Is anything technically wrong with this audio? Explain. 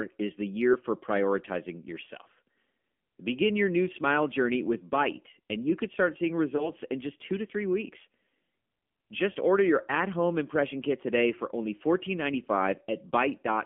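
Yes. The whole clip has passed through the AMR narrowband mobile codec. The speech is squeezed into a 200 Hz to 3.5 kHz line band, so the sound is thin and muffled. The codec rebuilds the voice from a vocal tract model driven by a few pulses, and with so few bits the damage is plainly audible: a buzzy, synthetic edge on the speech that fits a low mode of around 7.4 kbps.

There are also lost AMR speech frames from 6.56 to 6.71 s, between "you could start seeing" and "in just two to". A radio error corrupted what sounds like a single 20 ms frame, so the decoder filled the gap by repeating its last good pitch and vocal tract settings at reduced gain. This produces a brief dip or warble in the speech, and the voice sounds weak or rough for a moment as it recovers.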